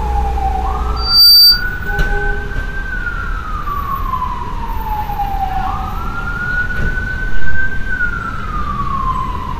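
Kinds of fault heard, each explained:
Loudspeaker feedback squeal: a single tone near 4.6 kHz swells up from 0.96 s, reaching full strength in roughly a third of a second and sitting about 10 dB above the surrounding sound before stopping at 1.64 s. This happens when a microphone hears its own loudspeaker and the loop gain exceeds one at that frequency. The self-reinforcing swell sets it apart from a steady electrical whine, which appears at full level and stays put.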